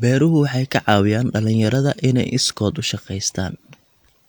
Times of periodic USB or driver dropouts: none

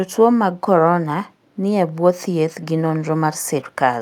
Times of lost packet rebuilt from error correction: none

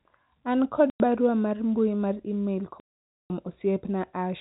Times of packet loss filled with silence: 0.90-1.00, 2.80-3.30

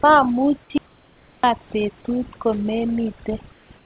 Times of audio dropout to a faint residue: 0.78-1.44

